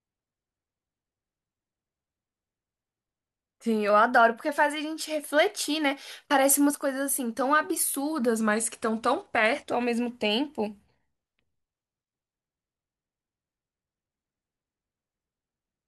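Speech, with two spots where the audio briefly runs at the wrong rate and then snaps back. From 3.90 to 4.49 s it speeds up by 5.6% and rises about 94 cents, and from 8.41 to 9.71 s it slows by 5.6% and drops about 99 cents. Each is close to a semitone of detuning. It sounds like a drift correction step, likely clock-sync software jumping the playback rate to refill or drain its buffer.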